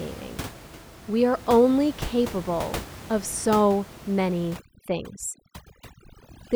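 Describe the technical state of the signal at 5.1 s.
Overdone noise removal runs from 4.56 s to 6.55 s: bands near the noise floor are cut away, leaving twinkling specks in near silence.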